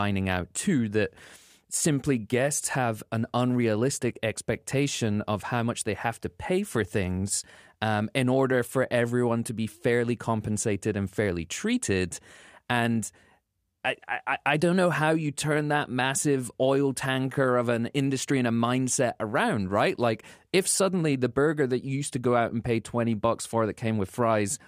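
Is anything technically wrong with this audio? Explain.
No, the speech signal shows no technical faults anywhere in the recording.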